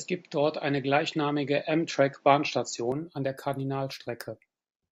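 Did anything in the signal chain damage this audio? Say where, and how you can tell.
Yes. From 0.0 to 2.92 s the speech sounds duller, with nothing above 7.6 kHz, a level roughly 5 dB different and a noise floor about 40 dB down, then it clears with no gap. This likely reflects the input switched to a poorer device at the driver stage.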